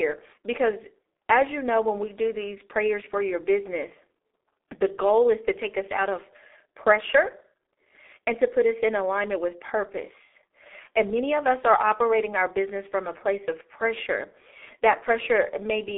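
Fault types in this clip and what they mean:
G.723.1 codec: the speech passes through a very low-rate telephony codec, which fits about 6.3 kbit/s, so it sounds muffled and hoarse, with smeared consonants and nothing above 3.8 kHz. Unlike a plain telephone band-limit, the heavy roughness comes from coarse, slowly updated 30 ms frames.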